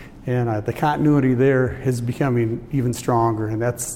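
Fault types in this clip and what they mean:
No faults can be heard.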